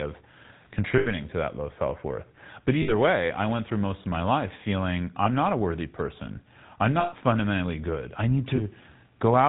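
Throughout the speech, the GSM full-rate codec adds a plainly audible buzzy, gravelly roughness, and nothing above 4 kHz comes through. That fits the 13 kbps full-rate coder, which models the vocal tract and excites it with sparse, regularly spaced pulses. The grit comes from that coarse pulse excitation, which sets it apart from plain band-limiting. A simple low-pass would sound muffled but smooth.

Lost GSM frames break in at five points. The first is from 0.98 to 1.09 s, just before "to that low self", and lasts about 80 ms. The next runs 2.82 to 2.93 s for about 60 ms, then comes a 20 ms loss at 5.24 s. The longest, about 120 ms, runs 7.00 to 7.13 s between "a worthy person I'm" and "fundamentally good I need". The last is a 20 ms loss at 8.56 s, after "fundamentally good I need". Each time, the decoder repeats the last good frame's settings, so the sound hangs as a rough, metallic ring instead of dropping to a silent gap.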